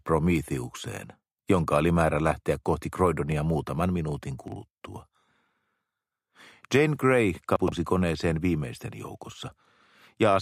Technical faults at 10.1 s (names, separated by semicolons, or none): none